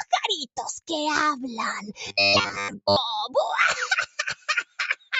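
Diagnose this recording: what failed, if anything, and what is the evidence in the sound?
A speech-tuned noise suppressor was left on in the call processing, and it's applied to music or sounds across the whole clip. Held material and tails keep getting pulled down while attacks come through, so the level pumps with swings of around 10 dB.

From 2.06 to 2.96 s there's robotic sound from repeated short buffers: a rigid, metallic 100 Hz buzz riding the sound. It's likely a driver or buffer underrun, with roughly two thirds of that stretch replayed from a 10 ms chunk. That fits a 10 ms buffer.

Near the end there's sound cut by the noise suppressor, first at 4.35 to 4.79 s with a drop of about 19 dB, then at 4.96 to 5.13 s at about 17 dB. The suppressor took sustained content for noise and ducked it hard, while the 8 kHz-limited call path carried it through.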